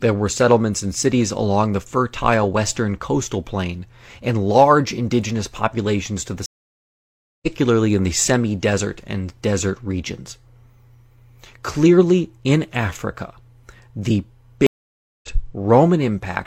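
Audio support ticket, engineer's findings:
Stream reconnect, 6.46–7.47 s: connection drop, speech silent for about 0.96 s. Player reconnects, fresh decoder starts mid-stream. Speech resumes roughly a second later, so content is skipped.

Stream reconnect, 14.67–15.28 s: same mechanism. Gap of about 0.57 s, resumes roughly 0.4 s further on. Probable component: network/session layer, not decoder.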